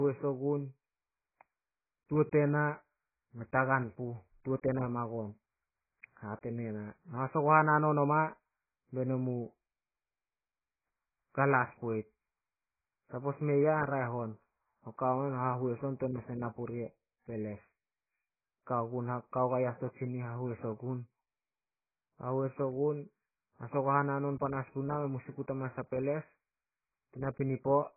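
Speech heavily damaged by AAC compression throughout the clip. Nothing is present above about 2.5 kHz, so consonants and sibilants lose their edge and the voice sounds dull. The remaining band is smeared, with a warbling, watery texture on sustained sounds where the encoder has starved the spectrum of bits. The damage is most likely from AAC-LC coding at a very low bitrate, consistent with roughly 12 kbps.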